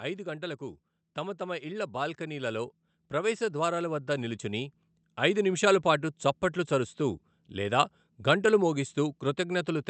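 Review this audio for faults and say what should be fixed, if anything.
Automatic gain rising runs from 0.6 s to 6.27 s, where the level climbs by about 10 dB. The automatic gain control judged the incoming speech too quiet and kept raising its gain over those several seconds, so the voice and the background noise swell together rather than the speech alone getting louder. The call codec's top end stops around 8 kHz throughout. To prevent it, set a proper input level at the microphone so the gain control has nothing to chase.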